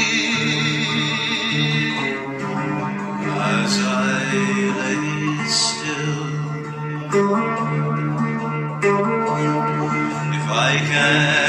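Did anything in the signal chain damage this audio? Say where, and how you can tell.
No, nothing audible points to damage at any stage of the chain, from capture through to playback.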